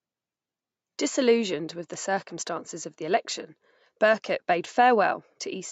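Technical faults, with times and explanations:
No faults found in this speech; the call microphone processing behaves as expected, with its high-pass trimming the lowest bass and nothing above 8 kHz.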